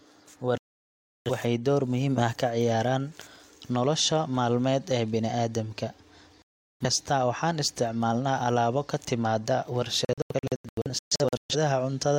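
A digital broadcast dropout mutes the speech at 0.58–1.31 s and 6.42–6.86 s, then breaks 10.05–11.55 s into short holes, each at most 128 ms. The receiver silences failed frames outright rather than smearing them, and the lost speech never returns.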